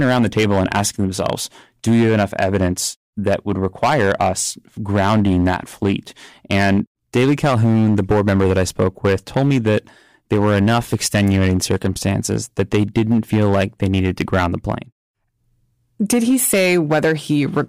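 Speech with hard clipping throughout, driven about 10 dB past the limit so roughly one sample in twenty is flattened, giving harsh fuzz on loud syllables; the waveform shows squared-off peaks, the spectrogram bright high-frequency smearing above them.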